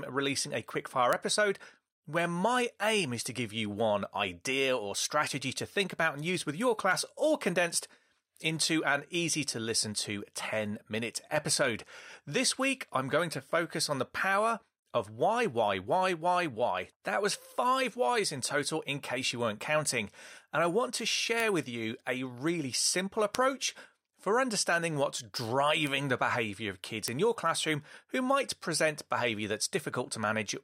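Five sharp, isolated ticks cut through this speech clip at 1.13, 21.40, 23.35, 25.87 and 27.08 s. Each is a bright, full-band click that has nothing to do with the speech around it, peaking at about -7 dBFS, except the quieter one at 25.87 s at about -13 dBFS. These are bit error spikes: a flipped bit throws one sample, or three at 23.35 s, off by a power of two before the signal snaps straight back.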